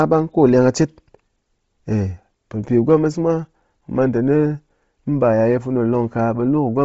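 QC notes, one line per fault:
throughout: Bluetooth LC3 compression, likely from a low-rate LE Audio link. The transform codec discards much of the upper spectrum and fills gaps with noise, leaving heavy breathy, grainy damage and nothing above 7.7 kHz, consistent with roughly 24 kbps and 7.5 ms frames.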